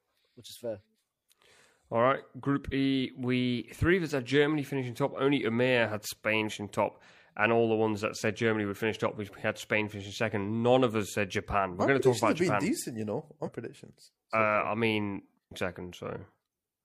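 At 6.46–6.51 s, 13.42–13.49 s and 15.47–15.51 s, damaged data in a compressed stream makes the decoder misread frames and lose sync, giving brief glitches in the speech. Each shows as an abrupt waveform discontinuity and a short garbled, broadband smear on a spectrogram.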